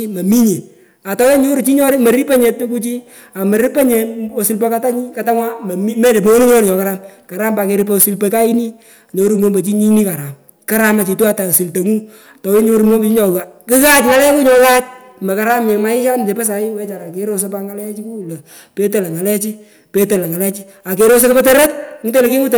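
From start to finish the speech is hard clipped. The level is pushed about 17 dB beyond what the chain can pass, and around one sample in twenty hits the ceiling and is sliced flat. Those squared-off peaks add harmonics high up the spectrum, so every loud syllable carries a harsh, buzzy fuzz. Unlike soft saturation, the distortion switches on abruptly at peaks rather than thickening the sound gradually.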